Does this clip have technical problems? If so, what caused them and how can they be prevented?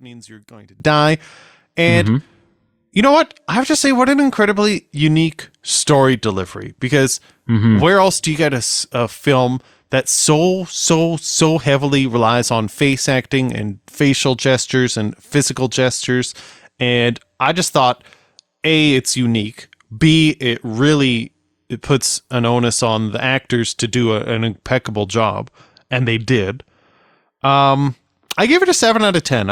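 Yes. For the first 0.8 s, one stereo channel likely has inverted polarity, so the content common to both cancels when they are summed to mono. The voice drops by about 22 dB and becomes a faint residue. Checking each channel's polarity before any mono fold-down prevents this.

Two devices are likely running on independent clocks about 70 ppm apart, so the buffer between them slowly drifts until a few samples are dropped or repeated. From 1.61 s to 28.79 s this causes a regular click roughly every 2.27 s, around fifteen in all. Locking both devices to one shared clock, or adding asynchronous sample-rate conversion between them, prevents it.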